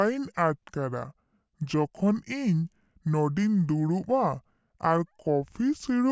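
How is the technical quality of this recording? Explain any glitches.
The whole clip has a wrong sample rate problem. From start to finish the speech runs at two-thirds speed and sits about 7 semitones low, which fits audio made at 24 kHz being played back at 16 kHz without conversion, so it sounds slow and deep.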